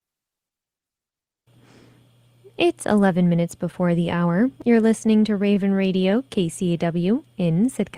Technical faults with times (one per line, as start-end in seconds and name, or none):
3.71-4.90 scattered short gaps
5.54-6.12 jitter buffer slow-down